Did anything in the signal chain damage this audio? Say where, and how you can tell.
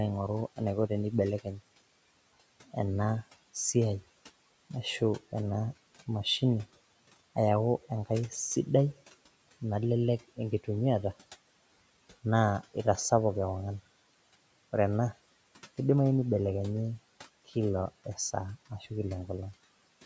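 Yes. The noise suppressor in call processing cut speech at 1.43–1.61 s and after "kila esaa" at 18.7–18.91 s. The waveform envelope dips about 18 dB and 7 dB, and the spectrogram energy thins where the suppressor mistook speech for noise.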